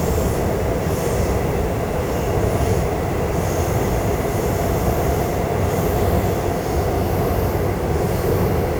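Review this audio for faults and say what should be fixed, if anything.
Grainy, gritty distortion runs through the whole recording, rougher on quiet passages, where faint sounds break into a sputtering buzz that rises and falls with the material, sitting roughly 25 dB below the signal. This is likely low bit depth without dither, with the audio rounded to around 6 bits so the error tracks the sound. Keep at least 16-bit resolution through processing, and add dither whenever reducing bit depth.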